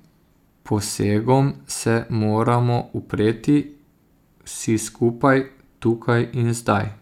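Speech recording; no technical faults detected anywhere in the clip.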